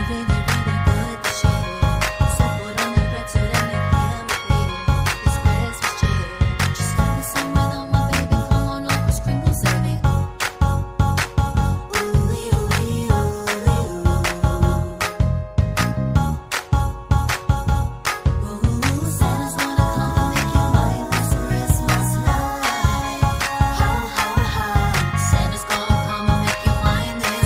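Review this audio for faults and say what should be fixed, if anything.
No faults found here; nothing needs fixing.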